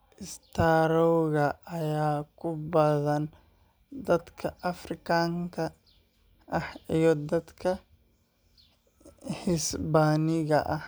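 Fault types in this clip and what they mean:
Loud pop: a sudden voltage pulse, likely from a plug or switch, adds one sharp pop near 2.73 s, peaking a few dB above the speech.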